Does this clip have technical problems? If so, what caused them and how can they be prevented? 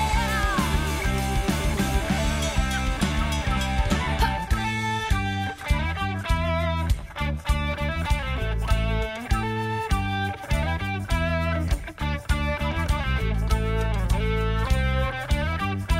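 Yes. From 3.73 to 7.73 s the audio drops to a lower-quality rendition of the stream for about 4 s: nothing remains above 14.9 kHz, the upper treble turns synthetic and smeared, and codec artefacts rise. This is an adaptive stream at a lower bitrate, where the player switched down when the connection slowed. The sound points to a move from a high-rate AAC to a low-rate HE-AAC rendition, whose top band is rebuilt rather than coded. Packet loss would leave gaps or concealment glitches, but here quality changes abruptly at both edges with no gap. Prevention: give the player a larger buffer and a steadier connection so it stays on the higher-bitrate rendition.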